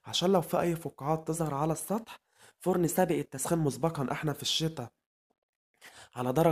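From 1.34 to 3.47 s the sound runs about 5.5% fast and sits 92 cents sharp, nearly a semitone, then snaps back. This is likely a drift correction step. Unlike wow, the shift jumps in and out abruptly and holds steady between.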